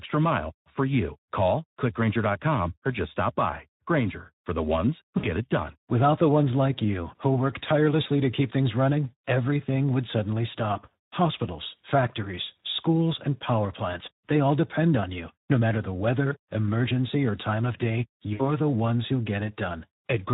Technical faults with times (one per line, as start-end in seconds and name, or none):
0.00-20.33 Speex codec
5.17-5.28 VoIP packet loss concealed by the speech codec
18.33-18.47 VoIP packet loss concealed by the speech codec